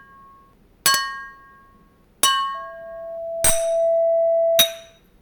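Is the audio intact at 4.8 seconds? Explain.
No. At 4.8 s the audio has loudspeaker feedback squeal, running from 2.54 to 4.99 s. A microphone is re-amplifying its own loudspeaker, and a 665 Hz tone swells over about one and a half seconds until it sits roughly level with the sound.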